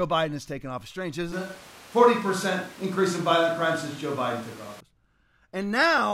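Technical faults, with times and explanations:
1.33 to 4.80 s, switch to a distant microphone: the speech abruptly turns roomy and hollow, with thinner bass, and snaps back just as suddenly at 4.80 s. There is no real drop in level, but room noise rises to roughly 25 dB below the speech. The likely cause is that the close microphone's feed dropped out and a microphone farther from the talker took over, picking up more reflections and background relative to the direct sound.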